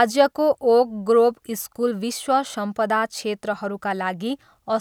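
No faults show up anywhere in this speech recording.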